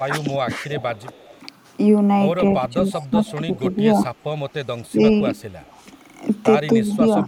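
From 0.06 to 1.15 s the speech dips by as much as about 15 dB, likely speech suppressed in double talk: the echo canceller turns down the talker along with the far side. The waveform envelope sags and the upper bands thin on the spectrogram. From 0.8 to 1.34 s a faint copy trails 244 ms behind, about 25 dB down. This is likely echo leak, residual loudspeaker sound that got past the canceller, seen as a weak, offset repeat of the speech striations. From 2.59 s to the end the same suppression returns, shallower at about 10 dB and totalling roughly a second, as intermittent envelope dents. Within it, the delayed echo reappears at 3.01 to 3.31 s, again 244 ms late and about 25 dB down. From 4.55 to 4.62 s the background is gated by the echo canceller, dropping about 13 dB as a brief gap in the noise floor. A last echo scrap at 6.91 to 6.97 s sits about 30 dB below the speech.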